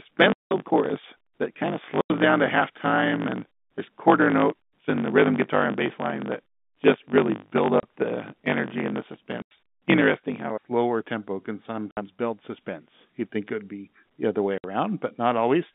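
From the start to about 10.52 s, a block size mismatch (truncated) shortens the audio: one stage hands on longer blocks than the next stage reads, and the tail of every block is discarded. The regular cuts produce a 50 Hz buzz, and the speech runs about 1.16 times fast while keeping roughly its normal pitch. The ratio fits blocks of 1024 samples being written against a smaller read size.

Over the same stretch and beyond, packet loss filled with silence punches hard-edged holes into the speech. The gaps fall at 0.33 s (180 ms), 2.01 s (90 ms), 7.8 s (30 ms), 9.42 s (90 ms), 11.91 s (60 ms) and 14.58 s (60 ms). Every length is a multiple of 30 ms, which points to 30 ms packets dropped singly or in runs and replaced with silence. The narrow telephone band of the G.711 line can be heard throughout.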